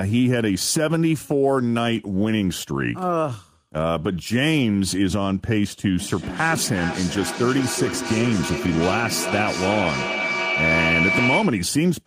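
At 5.99 s a feedback howl starts building and carries on until 11.75 s. It sounds like two devices in the same room sharing the call: the loop from mic to speaker and back adds gain each pass, so the repeats swell instead of dying away. They come roughly every 0.4 s and narrow to a tone around 2 kHz, and it peaks at about 1 dB under the speech level.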